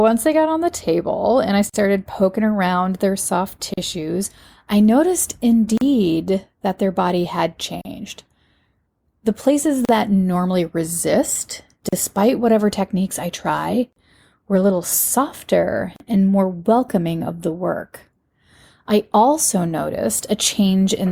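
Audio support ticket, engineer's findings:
Gap at a join of encoded pieces, every 2 s: 1.70, 3.74, 5.78, 7.81, 9.85, 11.89, 13.93, 15.96 s, about 42 ms first, 38 ms after. Separately encoded chunks joined untrimmed, so encoder start delay and last-frame padding stay in.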